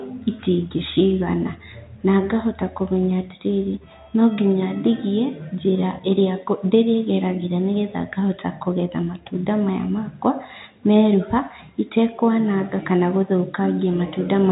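At 12.26 s a switching supply whistle starts and runs to the end of the clip at 14.52 s. A switching power supply is running in an audible burst mode or beating with another one, and its cycling leaks into the audio. The sound is a thin, high whistle near 4 kHz. Its pitch wanders between 4.2 and 4.7 kHz. It sits roughly 25 dB below the speech, above the telephone band's 3.8 kHz ceiling.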